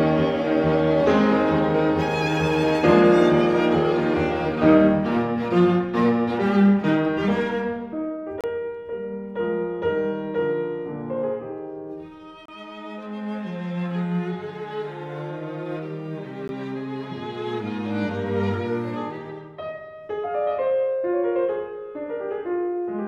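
Three short dropouts to silence cut into the sound, at 8.41 to 8.44 s, 12.46 to 12.49 s and 16.48 s, lasting about 30 ms, 29 ms and 14 ms, each with hard edges. These are gaps between stream segments: the spacing points to 4-second segments whose time stamps leave a small hole at each boundary, which the player fills with silence. Nothing is lost from the audio; the gaps add time rather than removing sound.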